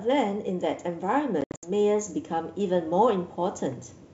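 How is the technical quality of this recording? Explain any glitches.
The recording has two faults: scattered dropouts early on and a slow level rise, over G.722 wideband coding that stays clean up to 7 kHz.

Packet loss on an ADPCM call, 1.41 to 1.70 s: about 170 ms of sound drops out across 220 ms, in hard-edged gaps of up to 70 ms, which points to a dozen or more short packets lost. After each gap the decoder's predictor and step size are out of step with the sender's, so the sound returns slightly distorted before settling. That mistracking is what separates it from a simple mute.

Automatic gain rising, 1.00 to 3.67 s: the gain control judged the input too quiet and raised it by about 4 dB. Voice and background swell together smoothly over about 2.7 seconds, unlike a sudden step in level.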